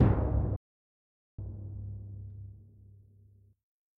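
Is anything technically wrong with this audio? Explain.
Yes. From 0.56 to 1.39 s there is a playback stall. The sound cuts out for about 0.82 s, likely because the player ran short of data.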